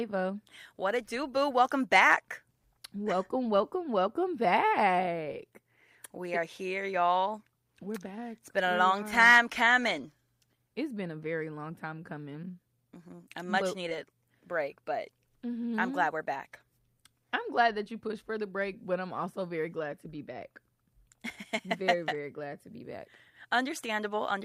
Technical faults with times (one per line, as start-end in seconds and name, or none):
13.89-13.93 short concealed packet loss